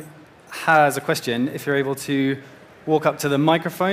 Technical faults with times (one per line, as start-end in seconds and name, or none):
0.70-0.83 hard clipping